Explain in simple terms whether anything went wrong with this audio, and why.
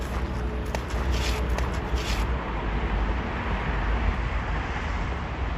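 From 0.95 s to 4.15 s, you hear everything twice: a second copy of the same sound plays about one second behind the first, at roughly the same loudness. It doesn't fade like a natural echo. It simply switches on and off suddenly. This is a doubled audio track. The likely cause is the same sound being recorded a second time through a slower route, or an edit that left two copies out of step.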